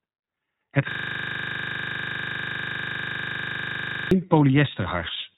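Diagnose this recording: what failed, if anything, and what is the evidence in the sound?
Codec stage: the whole recording carries iLBC coding damage, and it is plainly audible. Nothing passes above about 3.8 kHz, and the speech has the rough, synthetic edge of a low-rate codec that codes each 20 ms frame's excitation independently, which fits its 15.2 kbps mode. A simple narrowband channel or telephone filter would cut the top end just the same, but it would not add this frame-by-frame roughness to the voice.

Driver or buffer stage: from 0.91 s to 4.11 s a system hang loop takes over. One 40 ms piece of audio repeats exactly, 80 times, at 25 Hz, so it comes across as a machine-gun stutter, not a buzz. The host froze while the sound hardware kept cycling the same ring buffer. Network packet-loss concealment would fade or vary its repeats; these stay identical and evenly spaced for over three seconds.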